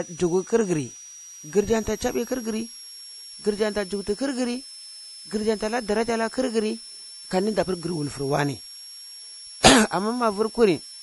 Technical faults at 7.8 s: switching supply whistle; MP3 compression

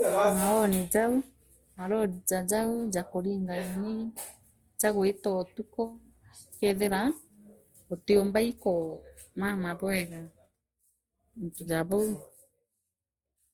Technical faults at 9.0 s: Opus compression

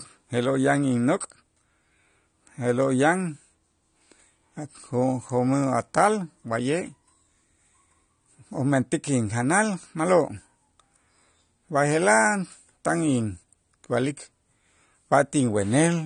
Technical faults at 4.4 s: AAC compression

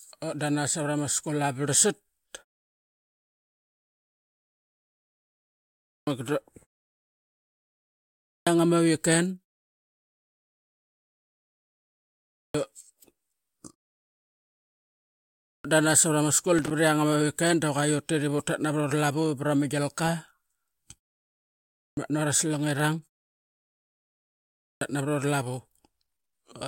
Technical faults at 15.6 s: clipped start after a pause

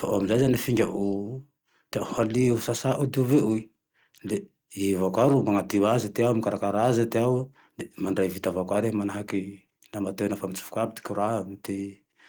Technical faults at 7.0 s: none

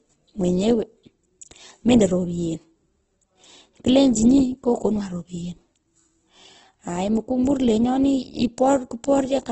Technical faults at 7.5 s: Opus compression; pre-echo

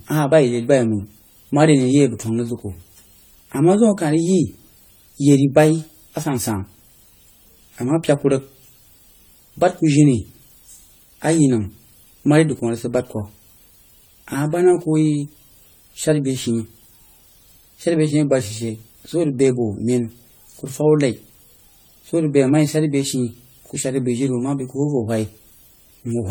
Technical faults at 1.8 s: generation loss

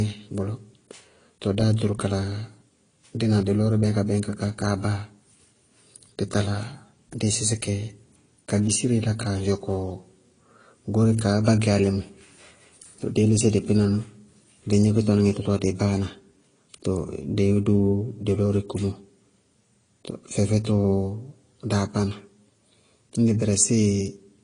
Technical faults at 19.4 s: transcoding between lossy codecs

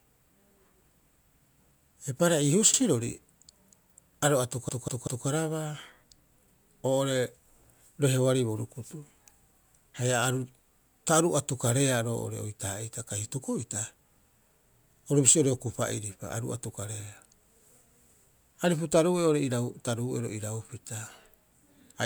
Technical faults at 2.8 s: repeated frames

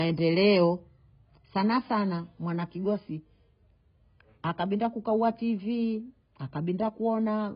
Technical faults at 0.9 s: AAC compression

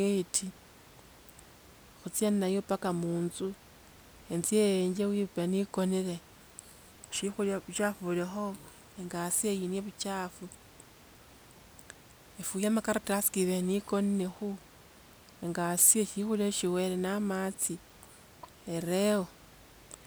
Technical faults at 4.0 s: none

